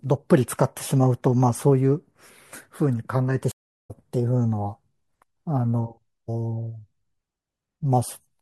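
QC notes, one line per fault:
3.52–3.91 s stream reconnect: the connection dropped and a fresh decoder started mid-stream, so 0.31 s of silence gives way to speech resuming roughly 0.2 s further on.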